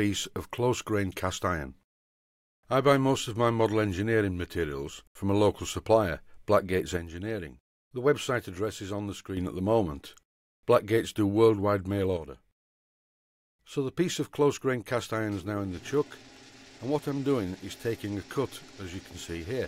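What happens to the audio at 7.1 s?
At 7.1 s the sound is inside a sudden level drop of about 6 dB that runs from 6.97 s to 9.37 s, then snaps back. The likely cause is one channel dropping out: with one side of the stereo pair gone, material common to both channels loses half its contribution to the mono sum, and anything carried only by the missing channel vanishes entirely until it returns.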